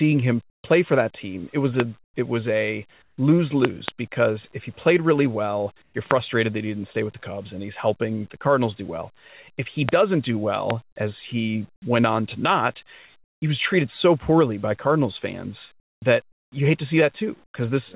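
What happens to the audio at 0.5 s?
From 0.5 to 0.64 s, the real background gives way to a flat, featureless hiss about 15 dB quieter. This is comfort noise in place of the background, likely from discontinuous transmission: the sender sensed a pause, and the receiver filled it with synthetic shaped noise.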